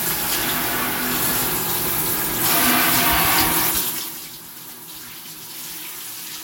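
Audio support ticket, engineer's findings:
Zipper noise, 3.72–4.18 s: ticking during a drop of roughly 15 dB. Gain stage applying unsmoothed 3 dB steps, around ten per second, each step clicking.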